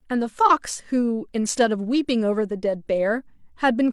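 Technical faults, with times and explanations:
No technical faults heard in this speech recording.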